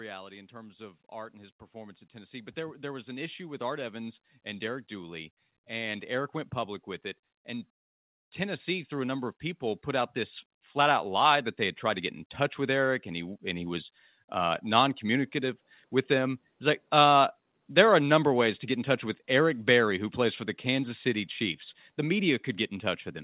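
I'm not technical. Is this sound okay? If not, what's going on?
No. There is automatic gain rising, twice. The system judged the speech too quiet and slowly turned up the volume on its own. From about 0.3 to 6.4 seconds, everything swells louder, leading up to "went public with it". It happens again from about 8.4 to 13.5 seconds, more gently, ending just before "and he was uh". The voice and the background noise grow louder together. The sound also passed through a phone-style call line, which removes everything above 4 kHz.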